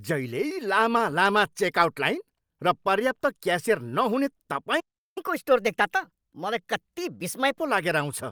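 Speech, with a playback stall at 4.80 s. The audio goes silent for about 0.36 s, until 5.18 s, then resumes. The likely cause is the player running short of data or its thread being blocked. Right after, from 5.18 to 7.60 s, comes catch-up at higher speed. The player works through its backlog at 1.15 times normal speed. Pitch rises by about two semitones, then both return to normal once the lost time is recovered.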